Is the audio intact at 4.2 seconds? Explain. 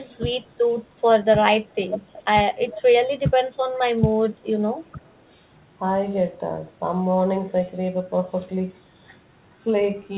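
No. Speech suppressed in double talk runs from 1.64 to 5.06 s: the voice dips by up to about 20 dB, roughly 400 ms in all, likely because an echo canceller could not separate this talker from loudspeaker echo and turned both down. An echo leak also overlaps, from 3.75 to 4.9 s: a faint copy of the voice, about 30 dB below it, trails by 393 ms, likely residue the loudspeaker side's canceller failed to remove and sent back.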